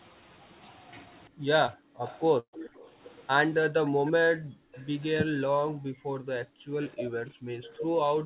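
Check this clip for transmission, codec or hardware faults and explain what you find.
Yes, several faults are present, heard through a call path band-limited to 4 kHz, which points to a G.711 mu-law codec.

Speech suppressed in double talk, 1.28–1.92 s, 5.25–5.40 s, and from 6.44 s to the end: while both ends talked, the echo canceller likely mistook the talker for loudspeaker echo and pulled the voice down. It falls by up to roughly 40 dB.

Short concealed packet loss, 1.66–1.70 s and 4.25–4.29 s: about 20 ms of audio arrived too late each time. The decoder filled the hole by extending the preceding sound before blending back, leaving a brief smear or wobble.

Echo leak, 2.06–2.87 s, 4.07–4.88 s and 6.83–7.71 s: the far end's canceller likely failed to remove everything its microphone caught from the loudspeaker. A copy of the voice returns about 0.34 s late, well below the direct voice and fainter each time.

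Burst of packet loss, 2.40–2.55 s: roughly 140 ms went missing in a row. The receiver held the last sound for about 130 ms while fading it, so a buzz or hiss dies into near silence before the audio resumes further on.

Background gated by the echo canceller, 3.92–4.75 s and 5.68–6.16 s: with the loudspeaker active, the canceller clamped the microphone, dropping the room sound by about 40 dB for about half a second before it returns once the canceller releases.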